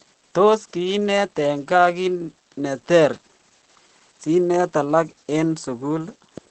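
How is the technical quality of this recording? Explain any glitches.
The recording has plainly audible Opus voice compression running through the entire speech clip. The SILK linear-prediction coder models each short stretch of voice as a filter plus a coarsely quantised excitation, which fits a low bitrate of about 12 kbps in wideband mode. Speech comes out muffled and slightly hoarse, with a faint robotic edge. On a spectrogram, energy stops sharply at about 8.5 kHz, leaving an empty band above, while harmonics below look smeared and blotchy.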